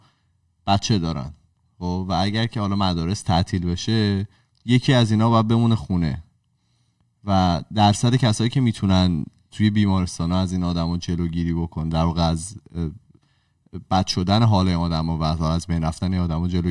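No technical faults turn up anywhere in this speech recording, so there's nothing to flag along the way.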